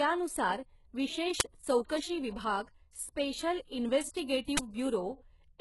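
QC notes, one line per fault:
Throughout, HE-AAC compression: heavy codec damage, with nothing above 11.5 kHz and a treble that sounds rebuilt rather than real. That points to likely HE-AAC at a very low bitrate, around 12 kbps, where copied low bands stand in for the top end and sibilants go gritty.
1.40 s and 4.57–4.59 s, uninitialised buffer: two blocks, 10 ms then 20 ms, where playback read memory nobody had written audio into yet. Those leftover values come out as a crack or brief noise burst instead of the sound.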